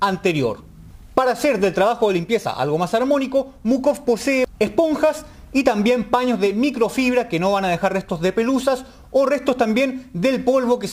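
The audio went through a crude rate conversion from start to finish, with samples repeated by nearest-neighbour selection instead of being properly filtered and resampled, which fits a change from 44.1 kHz to 48 kHz. Because the repeats fall in a fixed pattern set by those two rates, the error forms shifted, inharmonic copies of the material, sitting roughly 30 dB below the signal. This is heard as a gritty, inharmonic fizz that tracks the louder and brighter parts of the sound.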